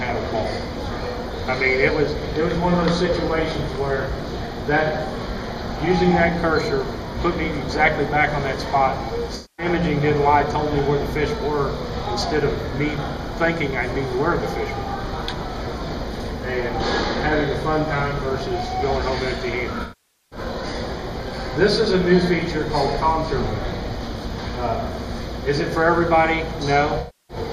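At 9.35 to 9.66 s, 19.82 to 20.39 s and 26.99 to 27.37 s, the audio turns into a smeared, noisy, phasey wash. This is AAC frame loss with concealment. The decoder lost runs of frames and rebuilt each gap from the last good spectrum, which fits about 235, 491 and 299 ms of missing data. A plain dropout would give a hard silence. Here, something that sounds like the previous moment fills the gap, without its detail.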